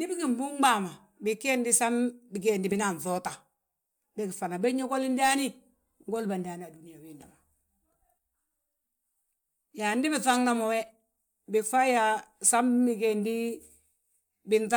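No technical faults can be heard in the speech recording: the signal stays continuous and steady throughout, with nothing breaking up or disturbing it.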